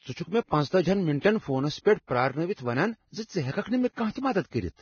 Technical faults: Vorbis compression

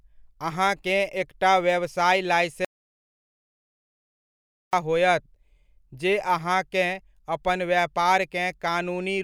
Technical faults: audio dropout to silence

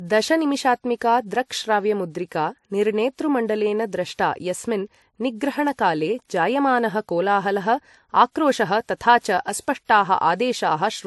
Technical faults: transcoding between lossy codecs

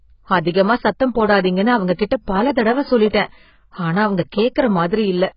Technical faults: AAC compression; pre-echo

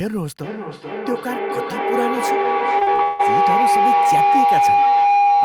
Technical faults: feedback howl; repeated packet loss (robotic sound)

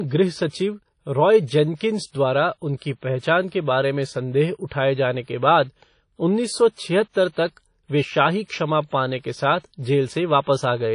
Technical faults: WMA compression

